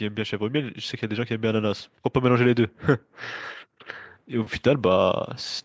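From 0.15 s to 2.79 s, automatic gain rising lifts the level by about 5 dB: the gain control judged the input too quiet and raised it gradually, so the speech and background noise swell together. The band tops out at 8 kHz, as expected from call microphone processing.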